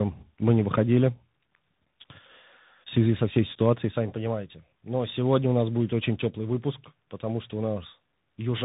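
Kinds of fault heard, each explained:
Tandem speech coding: Throughout the clip, the speech went through two speech coders in a row, the second re-coding the first's already degraded output. Its sound points to an AMR-style coder followed by CVSD. Nothing reaches above 3.8 kHz, and the speech sounds muffled, rough and warbly.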